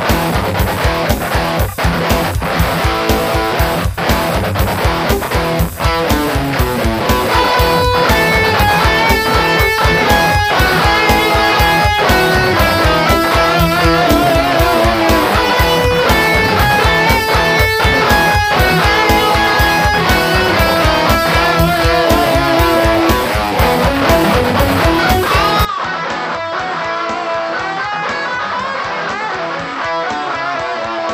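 At 25.65 s the sound changes character abruptly and stays that way to the end. Everything above 7.8 kHz is gone, the level drops by roughly 10 dB, and a new background noise appears about 40 dB below the signal. There is no gap at the change. This is likely an input switched to a poorer device mid-recording, such as another microphone or a headset's call profile, whose narrower band, lower gain and own noise floor replace the original source.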